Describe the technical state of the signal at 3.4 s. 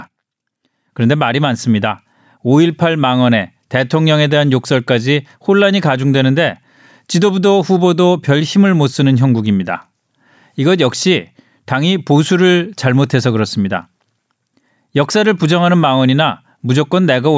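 At 3.4 s the speech signal is intact, with no dropout, clipping, distortion or other technical fault present at that moment.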